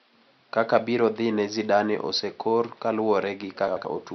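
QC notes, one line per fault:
3.68–3.85 s, frames out of order: a brief garbled flutter, as two neighbouring 85 ms blocks (likely four frames each) play in swapped order.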